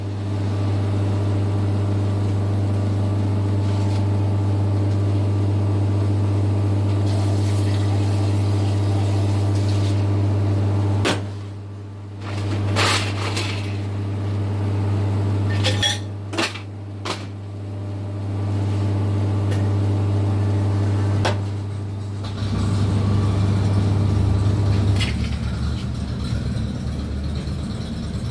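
No technical faults can be heard anywhere in the audio. There is nothing to mark at any point in the recording.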